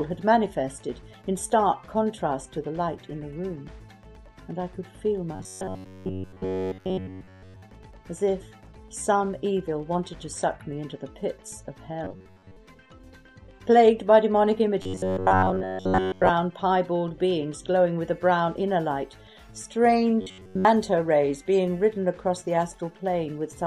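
Robotic sound from repeated short buffers at 5.35–7.62, 12.04–12.57, 14.82–16.30 and 20.21–20.65 s imposes a rigid 93.8 Hz buzz, likely from the last 10.7 ms looping while fresh audio is skipped.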